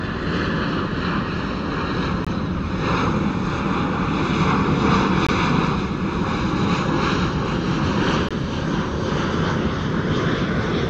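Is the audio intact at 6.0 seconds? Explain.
Yes, at 6.0 seconds the sound is intact, with no dropout, click, distortion or other technical fault at that moment.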